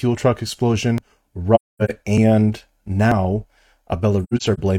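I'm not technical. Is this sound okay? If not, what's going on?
No. At 0.98, 2.18, 3.12 and 3.93 s the speech jumps ahead, likely a dropped buffer (overrun), where the recorder fell behind and lost pieces.

From 1.55 to 1.91 s and from 4.24 to 4.59 s the speech fades softly into short gaps. This is AAC frame loss with muting: missing chunks of compressed audio were replaced by silence.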